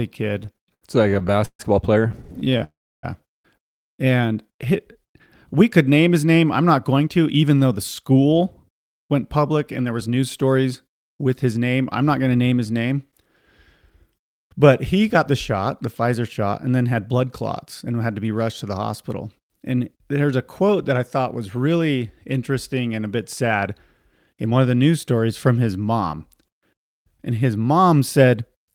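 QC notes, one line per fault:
0.43–2.62 s, repeated stalls (stutter): the speech keeps catching and restarting, 33 little hangs in about two seconds, the longest around 138 ms. Packets were showing up late or slower than playback, so the jitter buffer kept running dry and the receiver stretched the last bit of sound to cover each hole. Roughly half a second gets filled that way, about a quarter of the stretch, and nothing is actually lost. It just drags and stutters.
2.64–3.05 s, call audio freeze: straight after the stutter, the sound hangs for about 0.39 s. It's a held, fading continuation of the last sound, then about 0.3 s of silence before the speech picks up exactly where it left off. The likely cause is packets held up in transit with the buffer running empty. So it's an inserted gap pushing everything about 394 ms later, not a dropout.
4.10–5.08 s, jitter buffer slow-down: the speech drags here, running at about 92% speed with the pitch unchanged, so sounds come out drawn out. 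The buffer was low or had just raised its target delay, and the receiver padded it by repeating single pitch periods and bits of pauses over and over. That adds about 85 ms across the second or so.
6.79–28.72 s, jitter buffer speed-up: from here to the end the speech runs slightly fast, around 104%, with the pitch staying put. The buffer was holding more than its target, so the receiver kept trimming tiny slices of one or a few pitch periods to work the delay back down. Over those twenty-odd seconds that shaves off something like 0.7 s in total.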